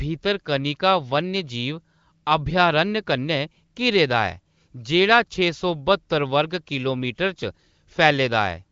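This speech clip has nothing technically wrong with it; it carries the band-limited sound of AMR wideband (HD Voice) coding at a rate high enough to leave the speech clear.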